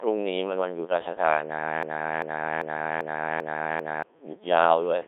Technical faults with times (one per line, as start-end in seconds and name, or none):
0.00-5.07 Codec 2 vocoder
1.83-4.03 broken-record loop